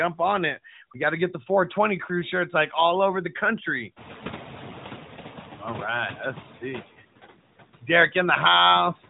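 A noise suppressor is running through this speech clip and cutting only about 2 dB, yet its frame-by-frame gain changes still leave their mark: the residual background sinks in the gaps and lifts again beneath the talker. Around 4 s the room noise jumps by roughly 24 dB, and the noise suppressor catching up becomes clear from 3.96 to 6.17 s, just after "all over the country" and until "let's see". Its noise estimate lags the sudden rise, so the louder background first comes through with little reduction, then sinks over about 2.2 seconds as the estimate adapts and the cut settles near 6 dB. The room noise still sits only about 19 dB under the speech after the rise. Through the narrowband mobile link, which behaves as AMR-NB at around 12.2 kbps would, nothing passes above 3.8 kHz, with light coding damage.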